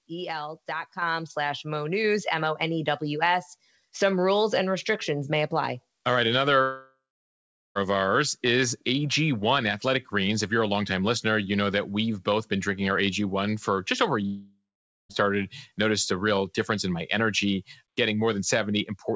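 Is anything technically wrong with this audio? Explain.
Yes. There are two kinds of fault.

At 1.02 s the microphone volume steps up by about 6 dB in one jump. The call software likely raised the input gain because it judged the microphone too quiet. Speech and background noise get louder together, instantly.

There are two long network dropouts, at 6.62 to 7.78 s and 14.26 to 15.12 s. The receiver stretches the last sound into a fading buzz. Then it goes quiet for about 0.8 s and 0.5 s. Speech returns with roughly 1.1 s and 0.8 s lost.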